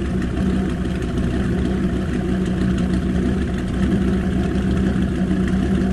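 Nothing stood out as a technical problem on listening to this recording of sounds.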